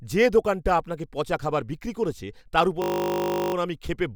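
At 2.82 s, just after "বিক্রি করেছে তার ওপর", the system stalled in a system hang loop while the audio hardware kept cycling one ring buffer, which fits a 20 ms buffer. That slice repeats exactly until 3.54 s, heard as a steady 50 Hz buzz.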